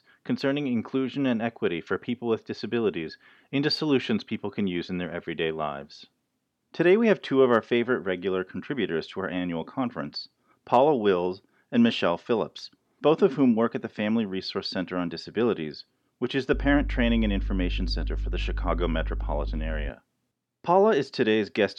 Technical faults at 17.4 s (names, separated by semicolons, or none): mains hum